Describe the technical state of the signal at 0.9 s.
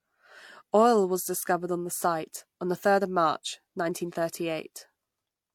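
At 0.9 s the signal shows the transcoding between lossy codecs present across the entire clip: the speech was most likely encoded by a low-rate parametric codec and then re-encoded as MP3, each stage adding its own artefacts to the last. The result is a smeared, metallic texture with swirling high-frequency detail layered over MP3 graininess. Nothing remains above 18.4 kHz, consistent with an HE-AAC stage near 40 kbit/s followed by MP3 around 96 kbit/s.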